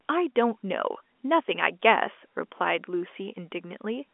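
The speech carries no technical fault: it is ordinary G.711 telephone coding, with the sound confined to a line band of roughly 250 Hz to 3.5 kHz and nothing above about 3.8 kHz, which fits a standard 64 kbps A-law channel.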